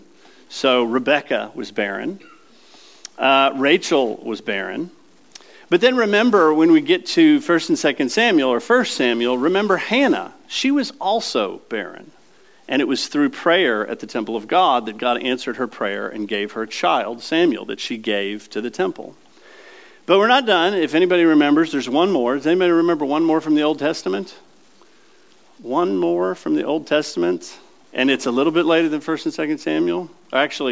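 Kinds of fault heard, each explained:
Nothing stood out on listening; no technical fault could be heard anywhere in the audio.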